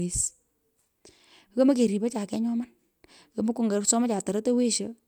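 No technical faults can be heard anywhere in the speech recording.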